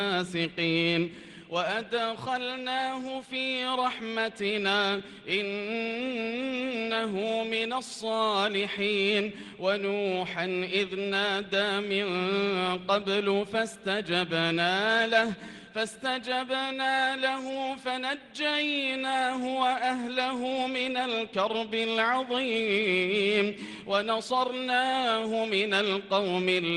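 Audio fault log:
The signal has no audible disturbance at any point in the recording.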